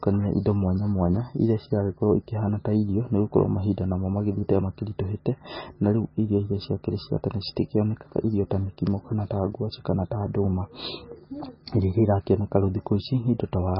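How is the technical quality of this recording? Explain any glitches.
Quality is poor throughout the speech. The whole clip sounds dull and watery, with swirling, metallic chirps on s sounds and smeared consonant onsets, and nothing above about 5.6 kHz. This points to heavy MP3 compression, likely at a very low bitrate, around 18 kbps. Short of bits, the encoder cut the treble at a fixed frequency and zeroed weak frequency lines, which flicker on and off between frames.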